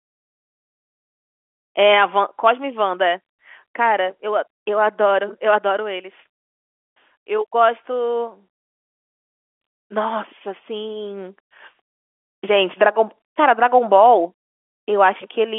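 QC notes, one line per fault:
No faults found.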